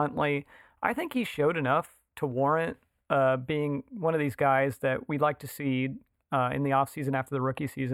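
Speech runs through a channel delay (comb filtering) fault for its whole length. One channel arrives a few samples late, well under a millisecond. Summed to mono, the two partly cancel. A first notch sits near 7 kHz, so the top sounds dull and phasey.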